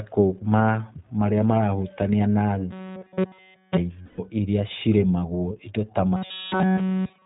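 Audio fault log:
Throughout, iLBC codec: the speech passes through a narrowband coder that keeps nothing above 4 kHz, so sibilants and breath sound dull and boxed in. Each frame's excitation is coded on its own, without borrowing from the previous one, which fits the 15.2 kbps mode with 20 ms frames. The damage is plainly audible as a rough, slightly synthetic edge over the speech.
2.71–3.77 s and 6.16–7.26 s, robotic sound from repeated short buffers: in both stretches the speech becomes a rigid metallic buzz pitched at 188 Hz that still roughly traces the syllables. The likely cause is new audio arriving too seldom, so playback loops the last short chunk and skips the real signal. All of the audio in these spans is repeated material. A 188 Hz buzz fits a loop about 5.3 ms long.
4.02–4.20 s, lost iLBC frames: a 160 ms gap, which fits eight lost 20 ms frames, is filled by the decoder repeating the last pitch cycle blended with noise and fading it. 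This makes the gap sound like a held, faintly buzzy vowel. Because iLBC frames are independent, the speech recovers almost immediately, with "iria cirĩmagwo" following.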